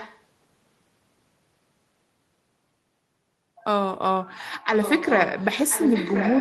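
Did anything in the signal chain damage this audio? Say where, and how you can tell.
Yes. There is an echo leak at the call-processing stage. A delayed copy of the speech, about 1.03 s late, sits under it from 0.0 to 0.21 s and from 4.74 to 6.40 s, roughly 15 dB down, then 10 dB. The likely cause is a far-end echo canceller passing back loudspeaker pickup.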